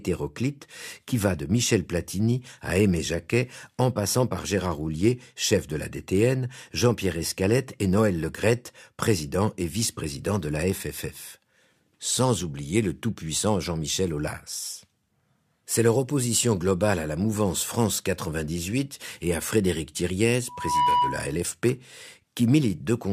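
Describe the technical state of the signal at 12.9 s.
At 12.9 s the speech signal is intact, with no dropout, clipping, distortion or other fault to be heard at that moment.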